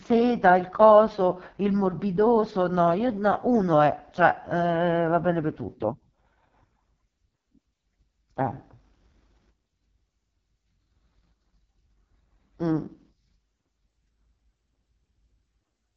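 From start to finish the speech sounds rough, raspy and buzzy, with a thin hiss in place of real treble and nothing above about 7.4 kHz. This is the AMR wideband (HD Voice) codec at one of its lowest rates, which fits the 6.6 kbit/s mode. At that rate the pulse-driven vocal tract model can't follow the voice closely, and the top band is only shaped noise, so the damage is heavy.

From 3.09 to 3.73 s the speech suddenly runs about 5.9% fast and rises by roughly a semitone (about 99 cents), then snaps back to normal. The same jump returns at 13.88 s and holds until the clip ends. Speed and pitch move together, so this is likely a drift correction step. Clock-matching software changed the playback rate in a single jump to refill or drain its buffer.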